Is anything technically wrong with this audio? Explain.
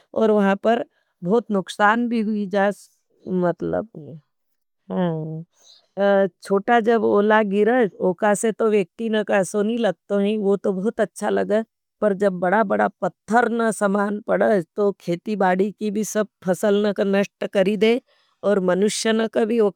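No, nothing technical stands out here; this speech recording sounds just as it should all the way along.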